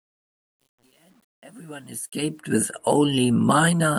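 From the start of the speech up to 2.4 s, the fade-in sounds gritty and grainy. It is at its worst through about 1.94 s, where the quiet opening is at its grittiest, before the level rises clear of it. This is truncation distortion on a fade. The gain stage rounded each sample to a coarse step without dither, which fits a stage keeping only around 9 bits. So at low level the waveform collapses into a few square steps, even though the fade's overall level rise into 2.4 s is smooth.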